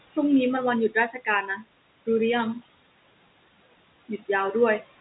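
Noise suppressor artifacts run through the whole clip. The suppressor pulls the steady room noise down by about 21 dB frame by frame, so the background drops away between phrases and swells back under the speech.

From 0.9 to 1.65 s comes speech cut by the noise suppressor. It mistakes parts of the speech for noise and turns them down with the background, by about 13 dB at the deepest point. Around a third of a second in total sounds swallowed and faint, heard through the narrow telephone band that stops near 3.9 kHz.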